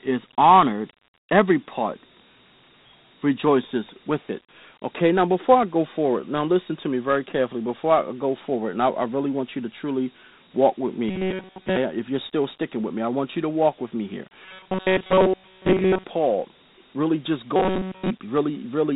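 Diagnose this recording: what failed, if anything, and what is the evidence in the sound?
The codec stage shows Dialogic VOX ADPCM damage throughout. Nothing is heard above 3.9 kHz, and a gritty hiss trails the speech. The 32 kbps rate fits 4-bit ADPCM at 8,000 samples a second. The coarse steps are plainly audible.

Robotic sound from repeated short buffers appears three times: 11.09 to 11.77 s, after "truly walk with me" and before "if you're still sticking"; 14.45 to 16.04 s, after "walk with me here"; and 17.56 to 18.11 s, after "really just". A rigid 188 Hz buzz runs through the speech. That fits a roughly 5.3 ms chunk being replayed. The first event is mostly repeats, and the later two are entirely repeats. The likely cause is a starved driver or playback buffer.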